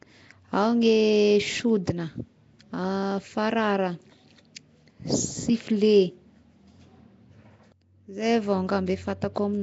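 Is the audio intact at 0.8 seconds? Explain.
No. At 0.8 seconds, as throughout the clip, speech carries a rough, hissy, underwater smear with nothing above 7.7 kHz, likely Nellymoser compression: noise-filled empty bands give grainy hiss rather than metallic warbling.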